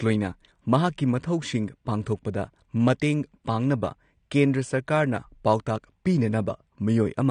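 From start to finish the speech carries plainly audible AAC compression artefacts: a smeared, warbling texture that is most noticeable on sibilants and held vowels, where the spectral detail sounds thinned and unstable. Content extends up to about 19.5 kHz with nothing above it. The likely cause is AAC-LC encoding at a low bitrate, consistent with roughly 32 kbps, where coarse quantisation of each frame's frequency lines breaks up fine detail.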